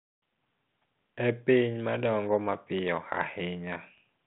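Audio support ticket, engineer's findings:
No fault found in this speech clip.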